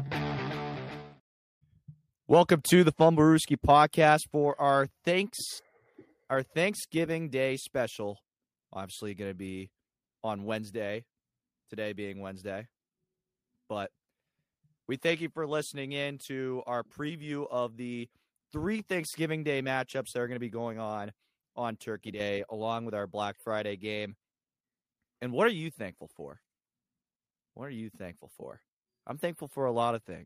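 A brief loss of one stereo channel, most likely a channel dropping out, occurs from 22.15 to 22.2 s. With only one side feeding the mono sum, the shared content abruptly dips by about 6 dB, and anything carried solely by that channel momentarily vanishes.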